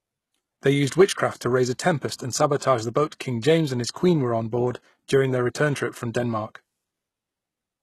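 From start to finish the speech carries plainly audible coding damage, most likely HE-AAC compression at a low rate, which fits something around 16 kbps. Only the lower spectrum is really coded. The top end is rebuilt by copying lower bands upward under a coarse envelope, so the treble reaches high but isn't the original. Its harmonics don't line up across the crossover, leaving s sounds gritty and metallic, and there's nothing at all above about 12.3 kHz.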